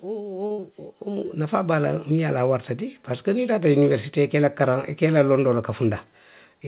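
Speech recorded over a narrowband call path, with everything above 4 kHz absent, which fits a G.711 mu-law codec. The clip has four faults.

From 0.05 s to 2.38 s there is automatic gain rising. The gain control judged the input too quiet and pushed its level up by about 7 dB, so voice and background noise swell together. On a waveform the envelope widens steadily across those two seconds, and a spectrogram shows the noise floor brightening along with the speech.

Inside that rise, from 0.46 s to 0.52 s, comes a short stall from a late packet. The packet missed its playout slot, the jitter buffer ran dry, and the receiver stretched the preceding sound by 43 ms until it arrived. Nothing is lost, but the sound is held unnaturally long. This shows as a flat, repeated stretch in the waveform and horizontal, frozen harmonics on the spectrogram.

Immediately after, from 0.52 s to 0.60 s, a burst of packet loss removes 60 ms of audio. 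The receiver concealed the gap with 57 ms of continued sound, fading it down before resuming further along. The result is a decaying held sound, seen as tapering, blurred energy ending in a visible jump where the speech picks up mid-sound.

Finally, from 5.88 s to 6.54 s, a jitter buffer speed-up plays the audio at about 105% speed. The receiver trimmed around 40 ms in total by cutting out many short pitch-period pieces to reduce excess delay. Pitch is unchanged but the delivery sounds slightly hurried, and a spectrogram shows a compressed time axis with tiny seams between cycles.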